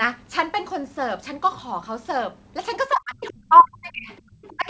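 From 2.89 to 4.11 s the speech sinks and breaks up, losing about a second in total, with the deepest dips around 35 dB down, so parts of it nearly vanish. This is likely speech suppressed in double talk: with both ends talking at once, the echo canceller could not tell the local talker apart from loudspeaker echo and pulled the whole signal down.

Faint scraps of a second voice then surface, very quietly at 4.16 s, roughly 35 dB below the speech, and more audibly from 4.42 to 4.55 s at roughly 25 dB below. This is likely the other side's voice leaking through, where the far end played on the device's loudspeaker and some of it reached the microphone without being fully cancelled.

Right after, from 4.56 to 4.67 s, the speech ducks again briefly, about 15 dB for around a tenth of a second, a second, shorter instance of the same double-talk suppression.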